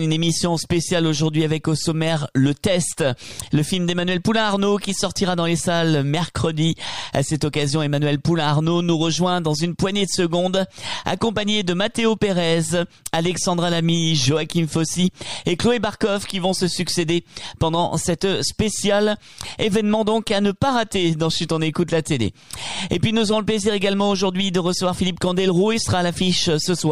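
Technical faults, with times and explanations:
11.46 s, dropped buffer (overrun): a sudden jump where the sound skips forward without any gap of silence, as though a sliver of audio around 10 ms long had been snipped out and the two edges butted together. The likely cause is that the recording software did not fetch a block of samples in time, so the hardware overwrote it, and the two sides were joined directly.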